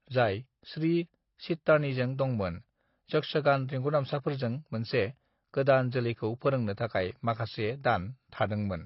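Right through the speech, nothing survives above 5.6 kHz, and sibilants come out smeared and warbly. That's likely AAC compression at a low bitrate, around 24 kbps by ear.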